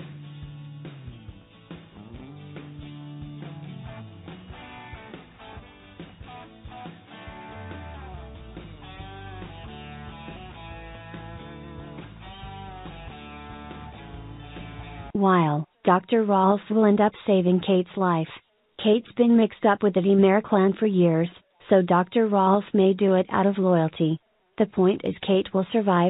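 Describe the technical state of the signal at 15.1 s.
At 15.1 s the signal is intact, carried through the WebRTC call path with the G.711 A-law coding it applies throughout, which leaves nothing above 4 kHz.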